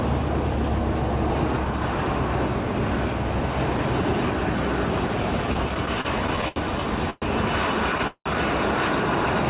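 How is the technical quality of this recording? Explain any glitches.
The recording has a stutter and two short freezes in its second half, all after a narrowband call path whose content stops at 4 kHz, which fits a G.711-type telephone codec.

Repeated stalls (stutter) run from 5.47 to 6.58 s: about ten brief hitches, the longest 78 ms, totalling about 214 ms. Late packets kept emptying the jitter buffer, and the receiver stretched the last sound each time. The audio drags unevenly. On a waveform, short smeared, repetitive stretches appear. On a spectrogram, they show as brief horizontally smeared bands.

The first call audio freeze, at 7.10 to 7.24 s, holds the sound for 118 ms as a buzz or hiss before the audio resumes. The second, at 8.07 to 8.28 s, lasts 183 ms and fades into about 70 ms of silence. Both were likely caused by delayed packets that left the buffer empty, so nothing is lost but gaps are inserted. 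They appear as flat, smeared spectrogram blocks, the second ending in a blank strip and a flat waveform line.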